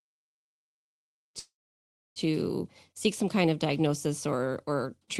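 At 1.39 s, right after "think that he needed", the speech stops for about 0.8 s in a call audio freeze, likely from packets stalling in transit until the jitter buffer emptied. The last sound smears into a brief fading buzz, then roughly 660 ms of silence, and the speech resumes at 2.19 s with nothing lost, just pushed about 765 ms later. On a spectrogram, a smeared band tapers into a blank column; the waveform shows a flat gap, and a gentle fade-in rises into 2.17 s.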